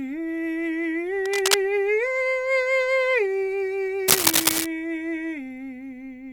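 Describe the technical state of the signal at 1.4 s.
A dense, uneven scratching and rustling sits over the music from 1.25 to 1.56 s, roughly as loud as the music itself. This cable scratch noise likely comes from a worn cable or connector being moved, its contact resistance fluctuating rapidly.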